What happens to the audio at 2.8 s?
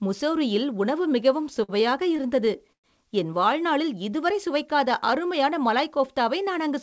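At 2.8 s the audio is near the end of a stretch of repeated stalls (stutter) running from 2.17 to 2.86 s. Packets arrived late, so the jitter buffer ran dry six times. Each time, the receiver stretched the last sound to cover the wait, about 172 ms in total and a quarter of the span. The longest gap is 114 ms. Nothing is lost, but the sound drags and catches. The G.722 call path leaves nothing above 8 kHz.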